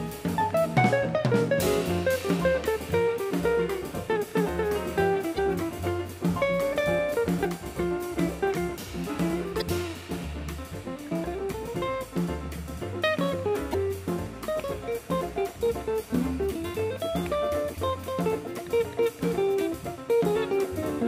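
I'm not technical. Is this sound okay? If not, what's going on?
No. At 5.35, 7.41, 9.58, 13.70 and 17.74 s there are brief glitches from damaged data in a compressed stream: corrupted bits garble the decoder's output for a few hundredths of a second.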